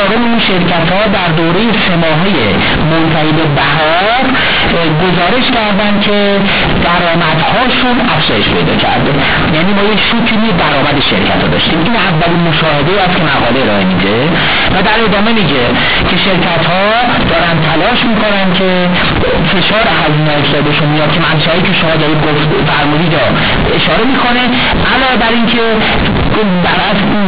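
From the first moment to the end, the speech comes through as companded audio read as linear. The A-law bytes are being played straight as 8-bit samples without expansion, so every sign flip throws the output across roughly half its range and quiet detail lands as loud as the peaks. You hear it as harsh, very loud buzzing distortion, with heavy noise filling the pauses, all riding on the usual 4 kHz telephone band.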